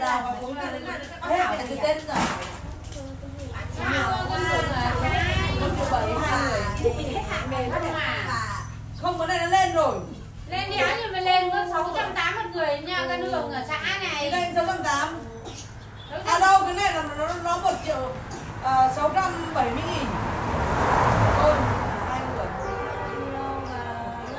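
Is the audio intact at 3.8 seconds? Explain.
Yes, the audio at 3.8 seconds is intact, with no dropout, click, distortion or other fault there.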